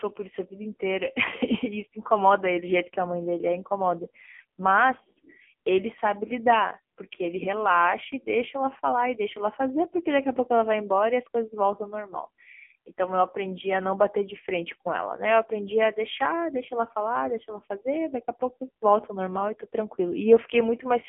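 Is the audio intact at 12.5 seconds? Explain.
No. At 12.5 s the speech is still under the AMR narrowband mobile codec damage that runs through the whole clip. The signal is confined to a telephone band of about 200 Hz to 3.4 kHz, with nothing above 3.6 kHz. The codec rebuilds the voice from a vocal-tract model excited by a few pulses per 5 ms subframe. The damage is heavy, leaving a buzzy, synthetic tone consistent with a low rate near 6.7 kbps.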